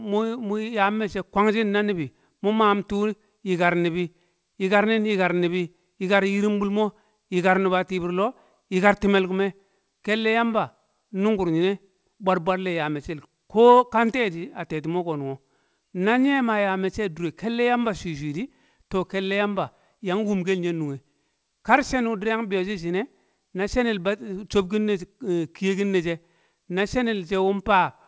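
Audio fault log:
There is no fault in this audio.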